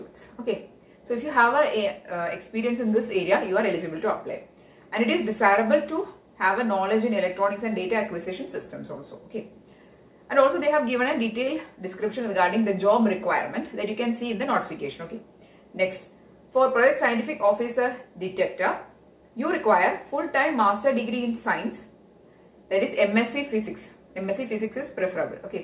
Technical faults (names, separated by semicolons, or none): none